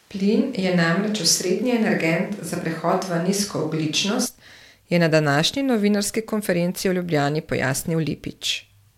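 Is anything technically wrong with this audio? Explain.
Yes. From the start to 4.26 s the speech is roomy and hollow, with thin bass and room noise about 35 dB below the speech, but at a similar level. It then snaps back to close, full sound, likely a switch to a distant microphone while the close one dropped out.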